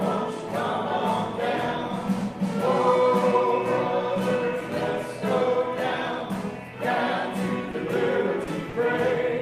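Short concealed packet loss occurs at 7.71 to 7.75 s, 8.43 to 8.49 s and 8.69 to 8.75 s, with about 20, 40 and 40 ms of audio missing. The receiver bridged each gap by extending the preceding sound before blending back, heard as brief smears or wobbles.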